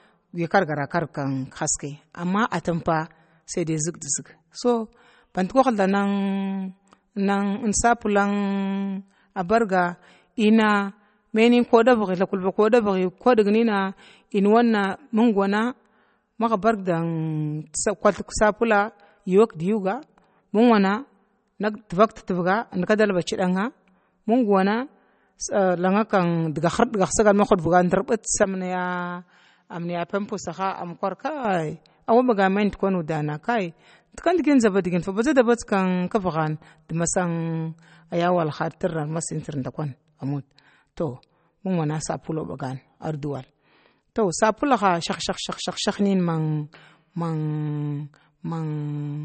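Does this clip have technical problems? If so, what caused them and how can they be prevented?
Yes. Throughout, the speech sounds watery and swirly with nothing above 8.4 kHz, likely MP3 compression at a bitrate that fits 32 kbps. Encode at higher bitrates to prevent it.

From 28.44 to 31.45 s an input switched to a poorer device, likely: the sound goes duller, drops about 10 dB, and loses everything above 7.6 kHz. Lock the input device before recording.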